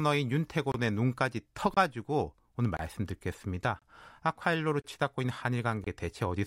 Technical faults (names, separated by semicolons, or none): gap between chunks